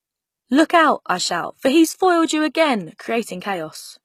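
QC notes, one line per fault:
Throughout, HE-AAC compression: the speech's treble sounds synthesized, with s sounds gritty and metallic, likely from spectral band replication copying lower bands upward at a low bitrate around 20 kbps. On a spectrogram, the upper bands look smeared and repeated, ending abruptly at 14.9 kHz.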